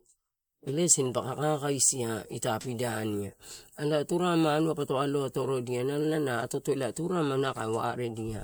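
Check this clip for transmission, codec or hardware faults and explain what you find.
Listening through the speech, nothing stood out that would point to a problem in the transmission path, the encoding or the recording hardware.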